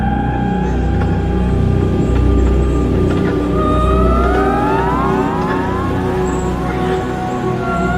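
Nothing stood out as technically wrong on listening to this audio.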